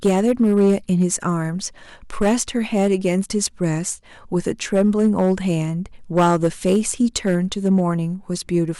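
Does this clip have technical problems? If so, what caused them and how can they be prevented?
Yes. Hard clipping runs through the whole speech clip. The signal was driven about 8 dB past what the converter or processing stage could pass, so the loudest peaks were cut flat. Only a small share of samples, around 2 percent, hit the ceiling, but each flattened top adds high harmonics, heard as a harsh crackle on the louder syllables. To prevent it, set gain so peaks stay several decibels below full scale, or put a limiter before the stage that overloads.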